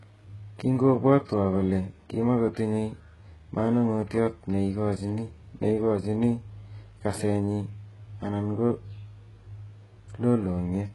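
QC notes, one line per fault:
Throughout: likely HE-AAC compression. Treble is rebuilt from copied lower bands, so s sounds turn gritty and metallic. Nothing above 11.5 kHz; fits roughly 12 kbps.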